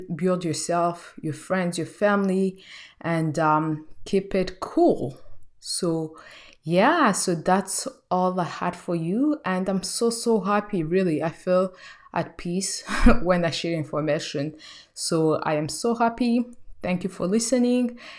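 A speech recording, with nothing technically wrong to be heard in it. The audio carries through its whole duration without any dropout, distortion or interruption.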